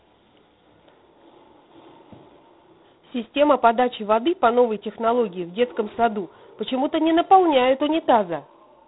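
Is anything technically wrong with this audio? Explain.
Yes. The whole clip has been through G.726 ADPCM at 24 kbit/s, and the damage is plainly audible. That coder only sends 3 bits per sample, each one a coarse guess at how far the signal strays from its predicted value, so quantisation noise rides right on top of the speech as a rough, rasping hiss that swells and fades with the talker's level. The band also stops dead around 3.9 kHz, giving that narrow telephone sound.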